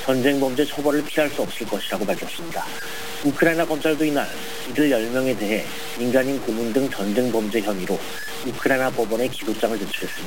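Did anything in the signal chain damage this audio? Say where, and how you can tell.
Yes: grainy distortion tracks the signal throughout, roughly 15 dB below it, likely low bit depth without dither from sample-format conversion truncating to about 5 bits.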